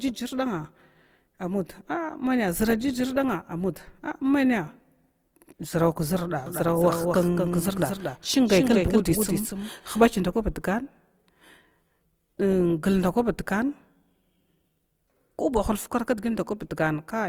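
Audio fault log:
Throughout: Opus compression. The speech sounds rough and grainy, with a noisy, hissy texture where the codec has filled bands with folded or synthetic content instead of leaving gaps, so there is little swirling. The damage is plainly audible, but the band stays full, with content reaching about 20.2 kHz. That points to the CELT music mode at a low rate, which fits a bitrate near 24 kbps, and is likely the cause.
6.46 to 10.00 s: doubled audio track. A second, full-band copy of the speech runs behind the original by roughly 200 ms, about 5 dB quieter. It has no decay and no room colour, so it sounds like a crisp, stuttering echo. It cuts in and out abruptly at both ends. A slower capture path feeding the same audio into the mix a second time is likely the cause.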